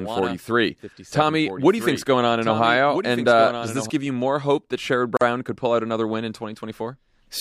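From the start of the clip to 3.9 s there is a doubled audio track: a second, full-band copy of the speech trails roughly one and a half seconds behind, about 10 dB quieter, with no decay or room colour. It is likely a second, slower capture path mixed in, and it stops abruptly just before "you more hope that".

At 5.17 to 5.21 s a gap at a join of encoded pieces opens, a 44 ms silence with smeared edges. Separately encoded segments were joined without trimming the encoder's start delay and end padding, so the speech resumes exactly where it stopped.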